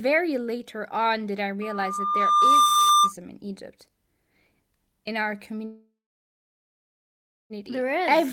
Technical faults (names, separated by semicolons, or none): loudspeaker feedback squeal; call audio freeze